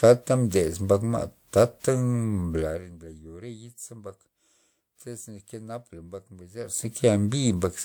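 A level control in the speech path jumps in 1 dB increments, around fifty times a second, with no smoothing between them, and this zipper noise is heard twice. From 2.54 to 2.99 s the level steps down by roughly 20 dB, and each jump leaves a small click, so a fast ticking buzz rides on the speech as it drops. From 6.55 to 6.93 s the level steps back up by a similar amount, producing the same zipping texture.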